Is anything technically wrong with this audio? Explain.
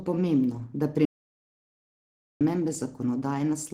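Yes. There is an audio dropout to silence from 1.05 s to 2.41 s. The speech cuts off abruptly and then resumes mid-flow. The gap is about 1.35 s of silence, with no room tone or background underneath. The likely cause is a brief loss of the input signal, such as a disconnected device, a broken link or a stray mute, while recording continued and wrote silence. Whatever was said in that stretch is missing.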